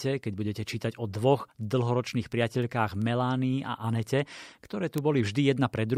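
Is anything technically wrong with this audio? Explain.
Yes. From 0.27 s to 5.96 s the speech carries word clock ticks, a steady train of sharp clicks roughly every fifth of a second, about thirty in all. The receiving device runs on its own clock, not locked to the sender's. The two clocks differ by roughly 100 ppm. Each time they slip past each other, one sample is dropped or repeated. That slip is heard as a brief tick, and the ticks vary in strength.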